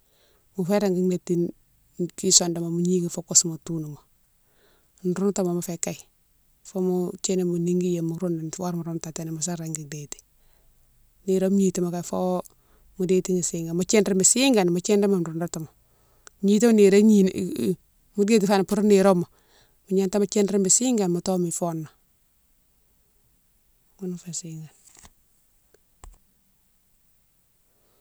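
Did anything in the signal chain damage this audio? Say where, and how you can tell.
Yes. At 18.70 to 18.75 s, just after "mo déti fani", a wireless microphone noise hit cuts through the speech as a brief burst of static lasting about 50 ms. The damage happens in the analogue radio link, before any converter: the FM carrier faded as reflections cancelled, and receiver noise rose over the signal. It differs from network packet loss because the sound is buried in hiss rather than dropping to silence or being smoothly concealed.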